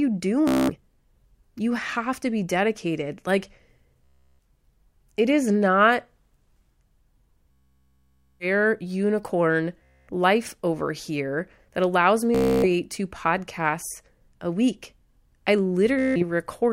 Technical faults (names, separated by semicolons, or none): Bluetooth stutter